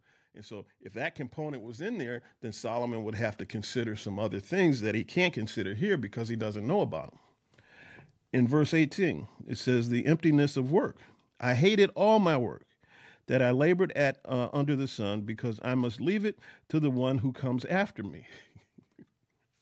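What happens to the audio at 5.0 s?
The automatic gain control judged the input too quiet and keeps raising its gain, a rise spanning 0.33 to 5.66 s and totalling about 13 dB. At 5.0 s the speech and its background are still swelling together, settling just before "here because he doesn't".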